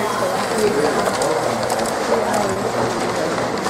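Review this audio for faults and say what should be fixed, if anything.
A short stall from a late packet occurs at 2.53 to 2.59 s. The packet missed its playout time, so the jitter buffer ran empty. The receiver stretched the last sound by 30 ms, then resumed from the same point. Nothing is lost. Everything after the stall plays 30 ms later. A slightly deeper or adaptive jitter buffer would absorb this late arrival.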